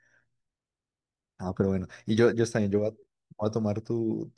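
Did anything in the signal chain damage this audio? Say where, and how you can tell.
No, nothing in this speech recording stood out on listening as damage from any stage of the signal chain.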